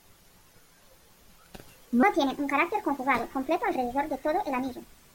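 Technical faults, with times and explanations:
2.03–5.15 s, section at the wrong speed: from 2.03 s to the end, the speech runs 1.4 times too fast and rises about five semitones, so it sounds hurried and high at once. The likely cause is this stretch being played against the wrong clock, which changes speed and pitch together. On a spectrogram the harmonics and formant bands step upward at 2.03 s and the syllable patterns compress horizontally; on the waveform the bursts crowd closer together.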